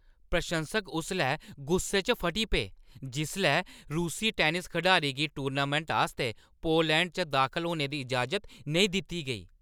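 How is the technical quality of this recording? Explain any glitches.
No technical faults are audible anywhere in the speech, so there are no glitches to explain.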